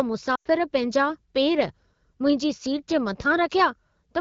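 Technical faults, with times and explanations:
0.35–0.48 s, lost AMR speech frames: about 0.1 s drops out, which fits five 20 ms frames failing their check. The AMR-WB decoder repeats the last good pitch and vocal tract settings with falling gain, so the sound drops to near silence within two frames, then returns weak or rough.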